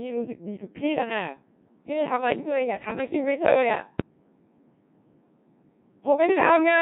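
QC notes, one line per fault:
throughout: Codec 2 vocoder. The speech has that robotic, buzzy digital-radio character, and the damage is heavy. The decoder isn't passing the original waveform. It rebuilds the voice from sine waves using only pitch, voicing, energy and a rough spectral envelope, so breath, texture and fine detail are gone. The thinness and coarseness fit a very low rate, around 1.6 kbit/s, where there are barely enough bits to sketch each frame.
3.94 to 4.10 s: bit errors on digital voice radio. For about 0.16 s the synthetic voice lurches, with sudden jumps in pitch, level and tone colour that come out as a short warble of robotic gibberish. At this rate each bit steers the pitch, level, voicing or spectrum of a whole frame, so even an error rate of around a couple of percent wrecks the few frames it lands on. That points to the link sitting near the edge of coverage.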